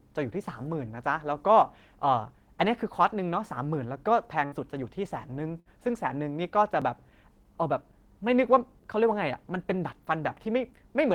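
A burst of packet loss hits at 4.45 to 4.55 s and again at 5.60 to 5.68 s. Each time, a short run of the speech stream failed to arrive in time, and the receiver filled about 60 ms by extending the last sound while fading it, so a held buzz or thinning hiss replaces the real audio. When the stream resumes, about 60 ms of speech has been skipped, so the flow jumps forward slightly.

At 6.82 s the speech jumps ahead by a few milliseconds, with no silence in between. The likely cause is a dropped buffer (overrun): the software fell behind the audio hardware, a block of samples was overwritten before it could be read, and the audio on either side was spliced directly together, leaving a discontinuity in the waveform.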